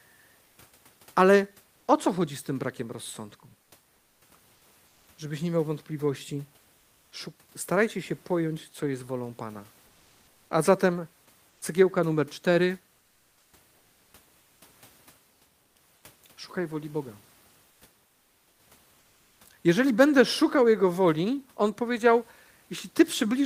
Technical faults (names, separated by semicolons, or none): comfort noise in place of the background